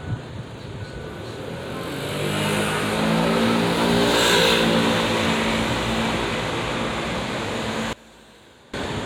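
From 7.93 to 8.74 s the sound falls by about 22 dB and turns faint, likely one channel inverted, cancelling shared content in mono.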